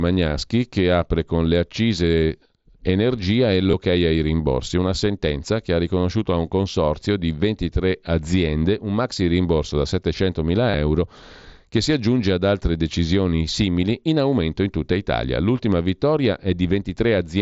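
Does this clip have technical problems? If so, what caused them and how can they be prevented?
Yes. There is concealed Bluetooth headset packet loss in this speech. It happens three times: from 2.21 to 2.29 s, from 3.71 to 3.73 s, and from 10.71 to 10.74 s. In each spot, voice packets from the headset never reached the phone. The phone filled each gap by repeating a matching stretch of the recent waveform. That gives a brief buzzy sameness and a slight warble as real sound resumes. The first event is scattered over about 75 ms. The gaps are short, and in the first event the longest unbroken one is only 15 ms. The mSBC headset codec carrying the call adds only light graininess. To prevent the dropouts, keep the headset close to the phone with nothing in between, and reduce 2.4 GHz interference from Wi-Fi or other Bluetooth devices.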